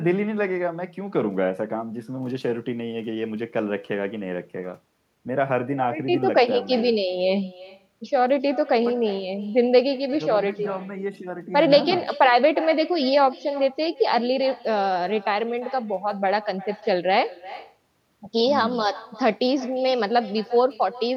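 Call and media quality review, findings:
Echo with no canceller, whole clip. Speech returns about 0.4 s later, about 19 dB down, thin. Far-end loudspeaker leaking into microphone, no echo cancellation.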